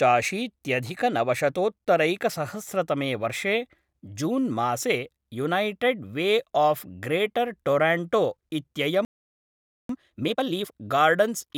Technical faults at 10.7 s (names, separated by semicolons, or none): time-compressed catch-up